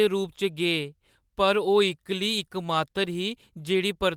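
Nothing stood out on listening to this speech recording; no technical problem could be heard at any point.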